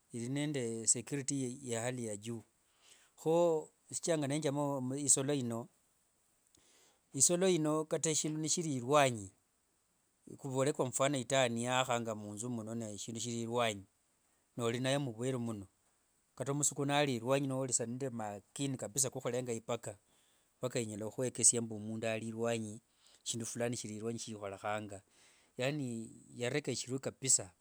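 Nothing stood out as a technical fault on listening to the speech recording.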